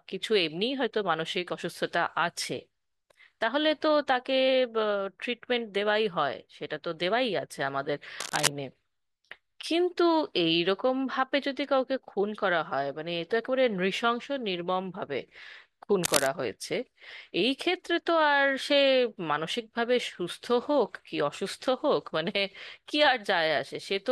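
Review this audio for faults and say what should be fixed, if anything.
Two short bursts of cable scratch noise cut across the speech, from 8.19 to 8.48 s and again from 16.04 to 16.27 s. Each is a dense, ragged rustle that sits roughly level with the voice. That pattern most likely comes from a worn cable, connector or control being moved, with its contact resistance jumping around and spraying noise into the signal. To prevent it, swap or reseat the suspect cable and connectors and keep them still during takes.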